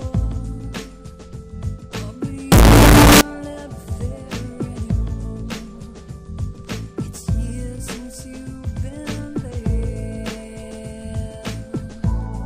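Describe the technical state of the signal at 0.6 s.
At 0.6 s the signal is intact, with no audible fault at that moment.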